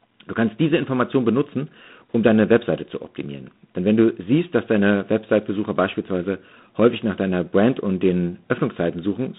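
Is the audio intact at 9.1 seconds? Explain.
No. G.726 ADPCM at 24 kbit/s affects 9.1 s, as it does the whole clip. Each sample is coded as a few bits of difference from an adaptive prediction, so a harsh, rasping hiss follows the speech level, and nothing passes above 3.8 kHz.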